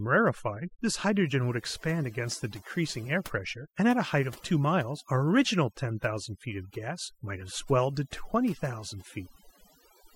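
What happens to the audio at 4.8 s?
At 4.8 s the speech is under overdone noise removal, which runs through the whole clip. The noise reduction is set too aggressively, so frequency bands close to its noise estimate are cut deeply, taking quiet speech detail with them. Gaps fall to near silence with twinkling specks.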